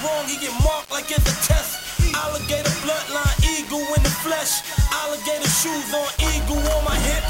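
From start to finish the audio carries grainy distortion that rises and falls with the sound itself, the mark of low bit depth without dither. It likely comes from rounding to about 5 bits, leaving the error only around 15 dB below the signal. Unlike steady hiss from dithered truncation, this grit vanishes in pauses and clings to every sound, with quiet tails dropping to silence or sputtering between two steps rather than fading smoothly.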